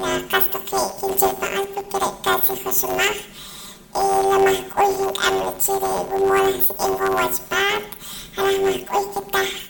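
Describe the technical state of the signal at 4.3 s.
At 4.3 s the speech is affected by planar audio read as interleaved, a fault present across the whole clip. Each 10 ms block stores all left samples followed by all right samples, but playback treats them as alternating pairs, so every block is replayed twice at double speed, left half then right half. With blocks this short, the result is a robotic buzz at about 100 Hz rather than a clear octave shift.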